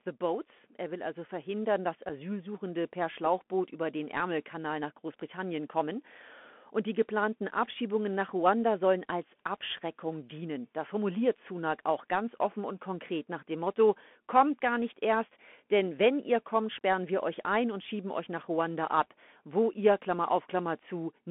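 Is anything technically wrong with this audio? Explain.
Yes. The speech carries a Bluetooth CVSD headset codec throughout. The one-bit delta modulation, consistent with a 64 kbps link, confines the band to roughly 200 Hz to 3.4 kHz, leaving a granular hiss, scratchy s sounds and distortion where loud high content outruns the adapting step size.

Unconcealed Bluetooth headset packet loss occurs at 2.09 s, just after "will also verhindern dass". About 7.5 ms of audio, roughly one packet, drops out with nothing patched in, leaving a brief abrupt hole.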